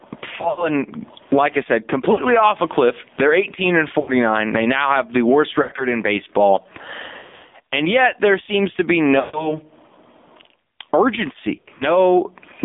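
Gain pumping runs through the whole clip, a swing of about 15 dB, so loud and quiet passages sit unnaturally close in level and the sound feels squashed. This is likely a microphone gain set far too high, with a fast limiter or compressor clamping down on every peak and releasing in the pauses.

The AMR narrowband mobile codec is also present throughout, and its damage is plainly audible. The line passes only about 200 Hz to 3.6 kHz, so the speech is thin and boxy with no top end. Its buzzy, synthetic texture points to a low AMR-NB mode near 7.4 kbps. That is a vocal-tract model driven by sparse pulses, with too few bits to rebuild the signal faithfully.

Lost AMR speech frames break up the sound seven times: at 0.38 to 0.70 s (120 ms lost, scattered over 200 ms), 2.12 to 2.25 s (60 ms), 4.00 to 4.11 s (80 ms), 5.62 to 5.88 s (100 ms over 160 ms), 7.18 to 7.51 s (220 ms over 320 ms, the worst), 9.20 to 9.52 s (140 ms), and 11.56 to 11.90 s (140 ms over 240 ms). 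Where frames failed, the decoder repeated the last good pitch and spectral settings at falling gain. The sound smears into a drawn-out warble and fades, then returns weak and rough. The longest unbroken run, 100 ms, sinks almost to silence.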